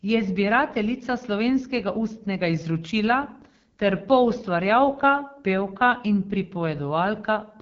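From start to finish the speech carries AMR wideband (HD Voice) codec damage, and it is plainly audible: a rough, raspy grain sits on the voice, the sound of the pulse-driven vocal tract model being starved of bits, which fits one of the codec's lowest modes, around 8.85 kbit/s. Above 6.4 kHz the band is synthetic shaped noise rather than real detail. A spectrogram shows a hard ceiling with nothing above 7.2 kHz and smeared, hissy texture near the top.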